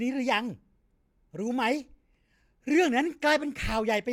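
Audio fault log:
No faults detected in this speech recording.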